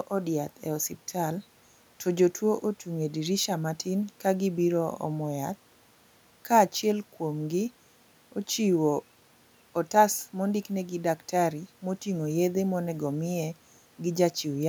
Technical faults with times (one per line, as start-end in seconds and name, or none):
none